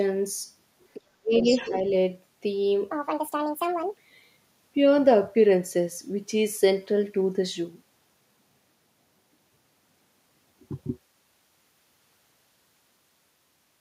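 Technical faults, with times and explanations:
0.94–1.01 s, other side's voice leaking through: a brief scrap of a second voice sits about 20 dB under the main speech. The likely cause is loudspeaker pickup that the echo canceller left in the microphone signal.
1.18–1.44 s, speech suppressed in double talk: the main voice dips, by as much as about 35 dB, for roughly 150 ms in total. This likely comes from a canceller that could not tell speech from echo and attenuated both.
1.41–1.69 s, other side's voice leaking through: a longer stretch of the far voice, about 15 dB below the speech. This is likely more residual echo left after cancellation.
1.68–1.73 s, speech suppressed in double talk: a short, shallow dip of about 5 dB and about 50 ms while the far voice is present. This is likely the canceller clamping down again during overlap.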